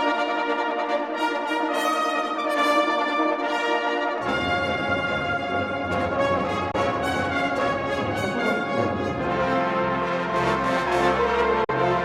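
A likely Bluetooth dropout twice starved the link of packets, muting the output. At 6.71 to 6.75 s a hole of about 21 ms, consistent with one lost frame, cuts in; at 11.64 to 11.70 s a gap of about 43 ms suggests two. The sound then resumes further on.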